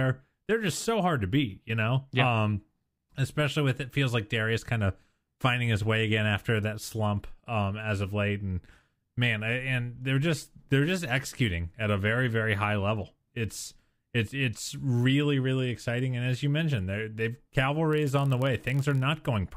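From 17.91 to 19.04 s the speech carries a block size mismatch (padded): zero-filled gaps in each block produce a 43.1 Hz buzz, fitting a 1024-sample read block, with negligible slowdown.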